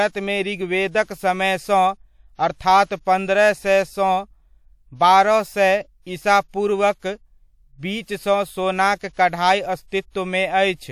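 Speech, with one pre-echo at 8.97 to 9.01 s: about 45 ms of hiss creeps in before an attack, smearing it, since the codec spread that block's quantisation noise backwards.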